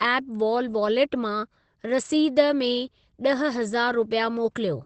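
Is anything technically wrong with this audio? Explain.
Yes. Opus voice compression runs throughout: a low-rate SILK linear-prediction coder, which fits roughly 12 kbps, cuts everything above 8.5 kHz, leaving the speech muffled, hoarse and slightly robotic.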